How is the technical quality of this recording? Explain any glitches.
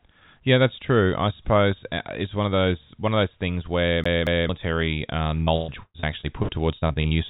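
The recording has two clear glitches. The speech passes through a narrowband call channel with nothing above 4 kHz, which fits G.711 A-law at 64 kbps.

CD stuck on one turn, 4.04 to 4.49 s, right after "of those things where". The pickup jumps back to the same spot, so a 0.23 s fragment plays twice with brief mutes at each jump. The result is a quick, even, mechanical stutter.

Repeated packet loss (robotic sound), 5.44 to 7.16 s. Eleven holes open in quick succession, the longest about 0.12 s. Each is patched by stretching the preceding sound, with roughly a third of the stretch concealed. This gives choppy speech with pieces missing.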